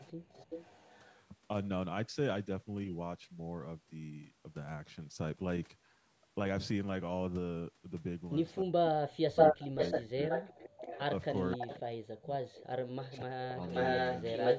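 From 0.0 to 1.2 s the far end's echo canceller likely failed to remove all of what its microphone picked up from the loudspeaker. That echo leak is heard as a faint copy of the speech, well below it, trailing by 370 ms.

At 0.17 to 0.22 s the canceller clamps the microphone while the loudspeaker plays. This background gated by the echo canceller is a quick dip in room sound of about 11 dB, lasting about 50 ms before it recovers.

At 8.5 s a very brief echo leak appears, fainter still and again 370 ms behind. From 8.63 to 10.99 s comes speech suppressed in double talk: with both sides talking, the canceller likely couldn't tell its own talker from the echo and turned both down. The voice drops by around 30 dB, for roughly a second in all.

Overlapping that, from 9.36 to 11.78 s, the echo leak returns at a 530 ms delay. It is now about 5 dB louder than the speech, so the delayed copy dominates.

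Further double-talk suppression follows at 11.56 to 12.56 s, the deepest at around 40 dB, and at 13.22 to 13.62 s, around 30 dB. Meanwhile the 530 ms echo continues at roughly speech level from 12.53 s to the end.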